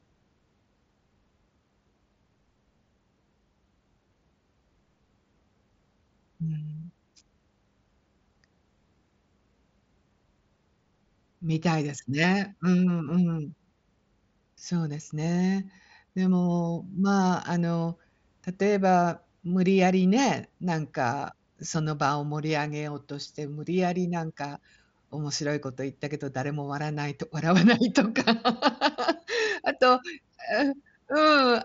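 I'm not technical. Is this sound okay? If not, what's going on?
Yes, this sound is okay, and nothing is going wrong in it.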